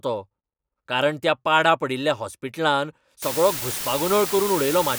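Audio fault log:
3.22–4.98 s, low bit depth with dither: right after "त्या पाडा पडिल्ल्या हॉस्पिटलान" the speech drops to roughly 5-bit resolution and stays there to the end of the clip. Dither added before the coarse rounding turns the quantisation error into a steady, signal-independent white noise, so the result is a constant, even hiss rather than grainy distortion. That hiss sits only about 10 dB below the speech, loud enough to be plainly audible throughout the passage.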